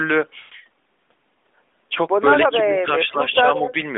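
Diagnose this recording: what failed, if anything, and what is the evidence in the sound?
Network and decoder stage: lost AMR speech frames. From 0.40 to 0.54 s the speech smears into a drawn-out, fading sound, about 120 ms of it, which fits six 20 ms frames failing their checks. The decoder stretched the last good pitch and vocal tract settings while ramping the gain down.

Call processing stage: speech suppressed in double talk. At 2.66 to 2.85 s the speech ducks by about 15 dB, and again at 3.02 to 3.20 s by about 10 dB. The likely cause is the echo canceller hearing both ends at once and turning everything down to be safe.

Call processing again: echo leak. Around 3.31 to 3.35 s there's a faint copy of the speech trailing 165 ms behind, sitting about 25 dB below the main signal, likely loudspeaker pickup the far-end canceller didn't fully remove. It's riding on the narrowband 200 Hz to 3.6 kHz AMR line.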